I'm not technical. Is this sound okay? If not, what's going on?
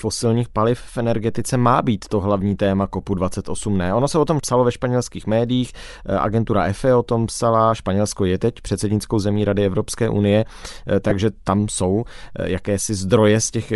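No. Throughout the speech there is a breathy, grainy edge and a dulled top end, with hiss-like filling where the crisp high detail should be. This is plainly audible and is likely Bluetooth LC3 compression, the squeezing Bluetooth LE Audio applies to save bandwidth.

At 11.10 s there is a very brief rough, noisy blip, about 15 ms long. This comes from lost LE Audio frames. A couple of small chunks of audio went missing in transit, and the receiver patched the gap by reusing the previous sound, scrambled into noise.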